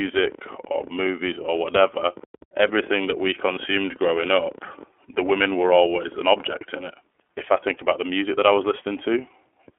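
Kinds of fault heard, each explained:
iLBC codec: The speech has been carried through iLBC, a narrowband VoIP codec that encodes each 30 ms frame on its own, here at 13.33 kbps, which fits its 30 ms mode. Within a telephone band of roughly 300 Hz to 3.4 kHz, nothing above that survives, so the voice sounds thin and boxed in. The coding damage is plainly audible as a rough, slightly synthetic edge across the whole clip.
Lost iLBC frames: At 0.72 s a single 30 ms frame went missing, and the iLBC decoder filled the hole by repeating the last pitch cycle blended with noise. That brief patch comes across as a short, held, faintly buzzy vowel sound in place of the real speech. Since each iLBC frame decodes without depending on the one before, the voice snaps back to normal immediately after the gap.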